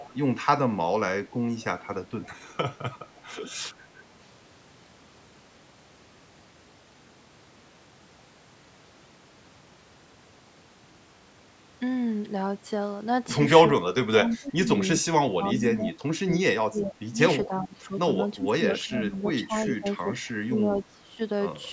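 From the start to 0.44 s, and again at 1.3–1.87 s, 2.23–2.78 s and 3.16–3.2 s, a faint delayed copy of the speech trails 377 ms behind, around 20 dB down at first and fading to roughly 30–35 dB below. This is likely an echo leak: the far end's loudspeaker output reached its microphone and slipped past the echo canceller.

Between 13.81 and 17.93 s, and again from 18.37 to 21.2 s, the speech repeatedly dips and thins in pieces, by up to about 20 dB in the first stretch and about 15 dB in the second, for roughly three and two seconds in total. This is likely speech suppressed in double talk, where the canceller, with both sides talking at once, turned down the wanted speech along with the echo.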